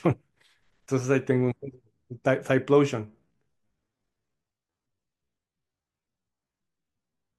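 A time-stretched section runs from 3.04 s to the end of this speech clip at 7.38 s, likely from software stretching that stretch of audio to fill a longer slot while holding pitch, by repeating short fragments. Playback drops to about 0.58 times the original pace at that point. The pitch stays put, but the slowed speech drags.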